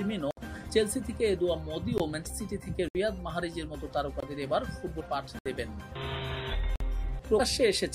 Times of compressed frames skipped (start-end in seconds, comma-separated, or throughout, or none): 0.68-0.70, 4.99, 7.39